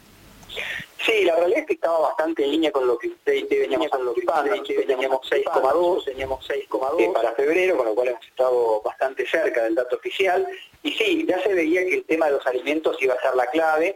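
A second capture path running late, or an edit holding two misaligned copies, likely caused the doubled audio track heard from 3.77 s to 7.23 s. A full-band duplicate of the sound sits about a second behind the original, roughly 5 dB quieter, so everything is heard twice in a flat, dry echo with no decay or room colour. The copy cuts in abruptly at the start of this span and drops out just as suddenly at the end.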